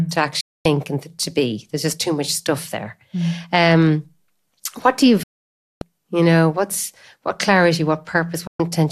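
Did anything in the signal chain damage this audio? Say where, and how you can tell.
Yes, a digital broadcast dropout at reception: the sound mutes at 0.41, 5.23 (after "what do you") and 8.47 s for 120–576 ms while failed frames are discarded.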